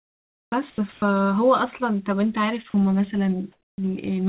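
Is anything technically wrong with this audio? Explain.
Yes. From 0.00 to 0.52 s and from 3.52 to 3.78 s, comfort noise replaces the background. The background sits about 64 dB below the loudest speech. It becomes flat, featureless hiss, about 1 dB quieter, likely from discontinuous transmission during pauses.

From 0.70 to 0.78 s and 0.92 to 1.02 s, speech is dropped by the voice detector. The sound gives way to steady noise or near silence, likely because the detector mistook it for background.

Through the call path, nothing reaches above 4 kHz, which fits G.711 mu-law.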